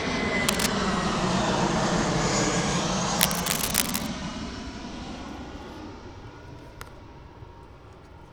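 A recording of sounds carries two bursts of cable scratch noise, a dense, uneven scratching roughly as loud as the sound itself, from 0.47 to 0.70 s and again from 3.15 to 4.07 s, most likely from a worn cable or connector being moved.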